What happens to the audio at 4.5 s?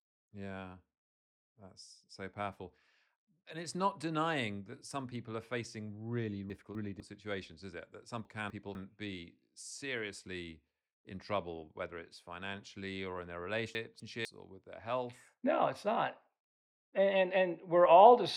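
Nothing goes wrong at 4.5 s: the speech carries on through that moment without any audible fault.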